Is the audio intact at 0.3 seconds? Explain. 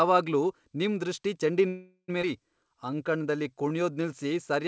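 Yes, the audio is intact at 0.3 seconds, with the speech carried cleanly through the call path, whose codec leaves nothing above 8 kHz.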